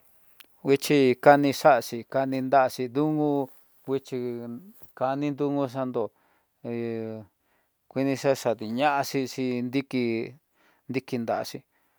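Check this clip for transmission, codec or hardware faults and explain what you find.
Nothing wrong turns up anywhere in this speech recording.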